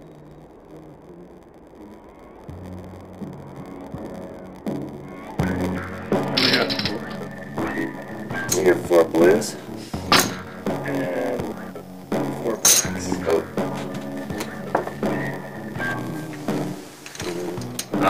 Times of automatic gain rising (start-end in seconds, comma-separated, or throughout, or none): none